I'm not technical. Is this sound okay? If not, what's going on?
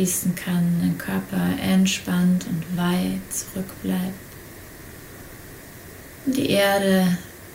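Yes, nothing stood out as wrong when listening to this sound.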